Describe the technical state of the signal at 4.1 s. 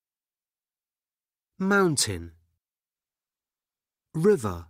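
At 4.1 s the signal is inside a call bitrate drop running from 2.96 s to the end of the clip. The encoder's rate falls from 96 to 21 kbps, so coarser quantisation and a narrowed bandwidth leave the sound rough, watery and muffled.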